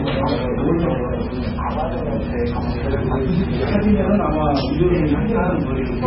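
From start to finish the treble stops dead at 5.5 kHz, and what remains below it has a watery, swirling quality, with faint components blinking in and out and transients smeared. The likely cause is heavy MP3 compression at a very low bitrate, around 16 kbps, where the encoder drops the top band and zeroes weak frequency lines frame by frame. A plain low-pass filter would dull the sound evenly, without this shimmering instability.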